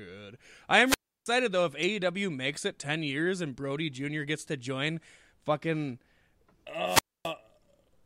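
Wireless microphone squelch dropout at 0.85 to 1.29 s and again at 6.84 to 7.33 s: the analogue FM radio link fades, hiss swells, and the receiver's squelch closes, leaving near silence of about 320 ms and 260 ms respectively before the speech returns.

Corrupt frame decoded at 1.83 s: a damaged compressed frame is played anyway, its misread values scattering energy to wrong frequencies. It is a short glitch, peaking around -25 dBFS, consistent with a single bad frame.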